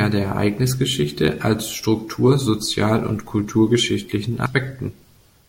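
At 4.46 s, right after "und kulturgeschichtlichen", compressed frames are skipped: roughly a tenth of a second vanishes and the speech jumps ahead.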